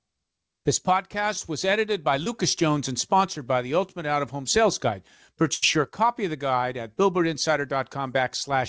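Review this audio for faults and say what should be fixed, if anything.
Short concealed packet loss at 2.24 to 2.28 s: about 20 ms of audio missed the decoder, which continued the preceding speech for 18 ms, leaving a brief smear.

Burst of packet loss at 5.54 to 5.64 s: about 80 ms was lost in a row, and concealment stretched and faded the last sound over 82 ms, with the missing stretch skipped when speech resumes.

Both losses happened on the network, upstream of the G.722 WebRTC path, whose audio stops at 8 kHz. To prevent them, send redundant audio such as RED and let the jitter buffer grow enough to absorb late packets.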